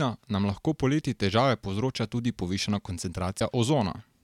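Missing MP3 frames most likely broke the bit reservoir at 3.38 to 3.41 s, just after "povzroča tudi povišana": the next frame borrowed bytes from the wrong place. The speech jumps ahead, leaving a brief disturbance about one 26 ms frame long.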